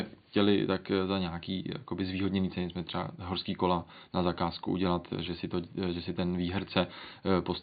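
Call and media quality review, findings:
No faults found in this call and media quality review; the room noise sits about 40 dB below the speech.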